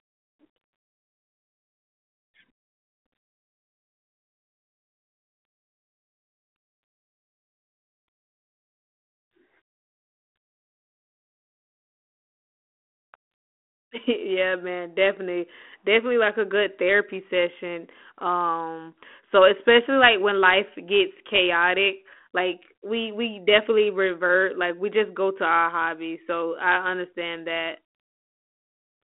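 Nothing in this speech recording stands out as a fault; it simply sounds like a call over a G.726 link at 32 kbit/s, with the usual telephone band running from about 250 Hz up to roughly 3.5 kHz.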